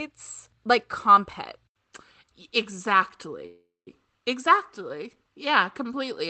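At 3.46 s the speech hangs for about 0.4 s, until 3.88 s: a call audio freeze. The last sound smears into a fading buzz, then roughly 170 ms of silence, and the speech resumes exactly where it stopped, just later. Nothing is lost. The likely cause is delayed packets draining the jitter buffer.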